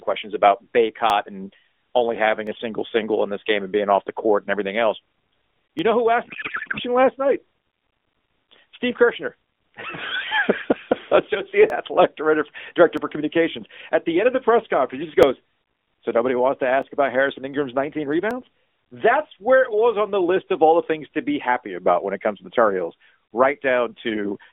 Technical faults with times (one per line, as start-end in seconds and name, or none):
1.10 dropped samples
2.47 dropped samples
5.79 dropped samples
6.25-6.80 codec payload misread
11.70 dropped samples
12.97 dropped samples
15.23 dropped samples
16.82 dropped samples
18.31 dropped samples